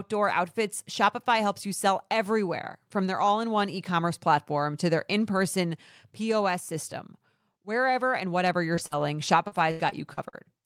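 Just after "and whatever", from 8.75 s to 10.35 s, the speech breaks up with repeated packet loss (robotic sound). Seven holes, the longest 83 ms and about 280 ms in all, were each patched by extending the preceding sound, so the voice turns choppy. A spectrogram would show smeared, frozen harmonic bands bridging the gaps, and the waveform would show flat, repetitive stretches.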